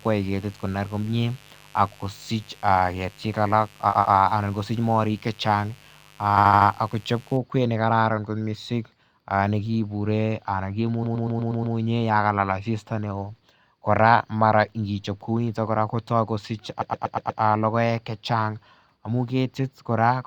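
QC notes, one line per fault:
0.00–7.37 s: mains buzz. A steady, raspy buzz sits around 30 dB below the speech and stops at 7.37 s. It is built on a 50 Hz mains fundamental, but sharp switching spikes twice per cycle spread its energy into a dense comb of harmonics well up into the kHz range. That is why it sounds gritty rather than like a pure hum. The source is interference from a dimmer, a rectifier or an unshielded run.
3.89–4.13 s, 6.37–6.69 s, 11.03–11.75 s, 16.81–17.41 s: repeated frames. In each span a short block of coded audio plays again back to back, so the sound stutters. The block is 120 ms at 3.89 s, 11.03 s and 16.81 s, which fits about six frames, and 80 ms at 6.37 s. The extra plays are two, four, six and five. Together the repeats lengthen the clip by 240, 320, 720 and 600 ms.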